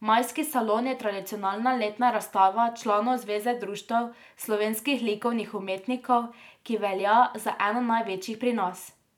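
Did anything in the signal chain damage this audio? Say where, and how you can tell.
No, no signal-chain damage heard.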